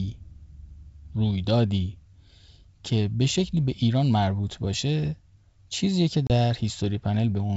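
At 6.27 s, running to about 6.31 s, there is packet loss on an ADPCM call: roughly 30 ms of the wideband speech, a few packets' worth, drops out into a hard-edged silence. Unlike a simple dropout, the sound does not resume cleanly. The decoder's adaptive predictor and step size have drifted from the sender's, so the speech comes back briefly distorted before settling over the next tens of milliseconds.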